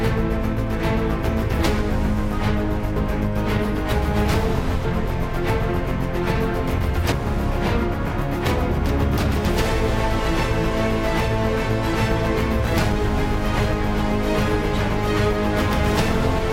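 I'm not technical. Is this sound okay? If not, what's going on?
No, not quite. There are two spots where the audio jumps ahead: at 2.96 s and at 7.12 s. This is called compressed frames skipped. The file stores sound in small chunks, here about 32 ms each, and some of those chunks were missing or rejected as damaged, so playback just leaps over them. The first jump loses about half a second, the second about a fifth of a second. At each join you'll hear a quick blip or click.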